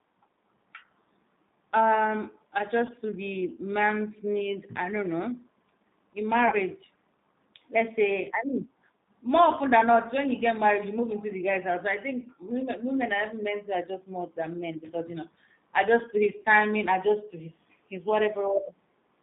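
The whole clip runs through a G.729 codec, and you can plainly hear it. The band sits at roughly 150 Hz to 3.7 kHz, and the speech has that slightly rough, synthetic edge you get when a low-rate coder, consistent with 8 kbit/s G.729A, rebuilds speech from a filter and a few pulses per frame.

On top of that, there's VoIP packet loss concealed by the speech codec at 2.87–2.92 s, 6.48–6.55 s and 16.42–16.45 s. The decoder fills in about 20 ms, 40 ms and 20 ms of missing audio by extending its last pitch and filter, which smears into a brief buzzy or noisy, fading blur that lingers past each gap.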